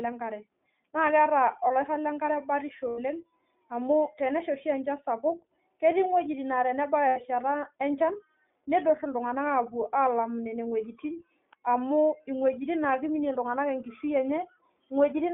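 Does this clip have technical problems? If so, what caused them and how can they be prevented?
Yes. The speech passes through the iLBC codec throughout, band-limited to 250 Hz to 3.6 kHz, with a plainly audible rough, synthetic edge that fits its 20 ms, 15.2 kbps mode. Unlike an ordinary telephone band-limit, it adds coding roughness, not just dullness. Prevent it with a wideband codec such as Opus.

Lost iLBC frames at 2.88 to 3.00 s (100 ms) and 7.08 to 7.18 s (80 ms) sound like a held, buzzy vowel, then speech recovers instantly, unlike a dropout's silence. Prevent them with a more reliable network path or forward error correction.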